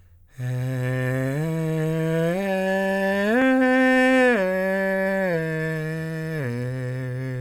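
From 4.23 to 6.22 s the music suffers repeated stalls (stutter): packets arrived late, the buffer kept running dry, and seventeen brief gaps, none over 13 ms, were filled by continuing the last sound. About 165 ms is patched in, with nothing lost, so the passage hitches and drags. A waveform shows short runs of copied cycles, and a spectrogram shows thin vertical seams where partials briefly freeze.

From 6.37 to 7.33 s a jitter buffer slow-down follows: to rebuild its reserve, the receiver repeated single pitch periods, adding about 109 ms and playing at 89% speed. The music sounds slightly sluggish at unchanged pitch. A spectrogram shows stretched events with horizontal partials held at the same frequencies.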